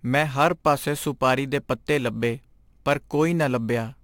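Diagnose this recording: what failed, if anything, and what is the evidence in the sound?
Crude rate conversion at the sample-rate conversion stage runs through the whole speech recording: a gritty, inharmonic fizz rides on the louder and brighter syllables and fades with them. The spacing of the error points to a 44.1 kHz to 48 kHz change done by picking the nearest sample, with no filtering, leaving distortion some 25 dB under the speech. A spectrogram shows faint stray lines and folded images between the true harmonics. The waveform shows tiny irregular steps.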